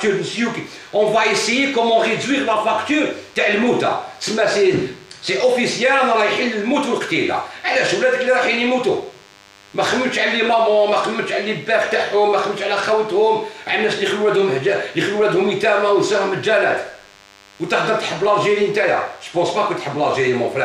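A thin, steady buzz runs under the audio for its whole length, the signature of DECT cordless phone buzz. A nearby DECT handset or base station transmits a radio burst every 10 ms, and the audio circuitry rectifies it, leaving a 100 Hz tone rich in harmonics, sitting roughly 30 dB below the wanted signal. On a spectrogram it appears as evenly spaced horizontal lines at 100 Hz multiples, constant from start to finish. A zoomed waveform shows small regular spikes every 10 ms.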